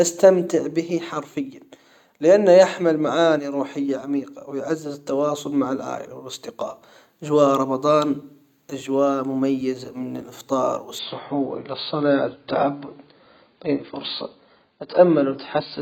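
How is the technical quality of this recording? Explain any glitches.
The recording has one fault: from 10.99 s to the end, the adaptive stream switches to a lower bitrate. The speech abruptly loses its treble, with nothing above 5.2 kHz, and codec artefacts rise. There is no gap at the switch, only a sudden step down in quality. This is the player falling back to a leaner encoding when the connection slowed, which fits a move from roughly 96 kbit/s to 16 kbit/s AAC.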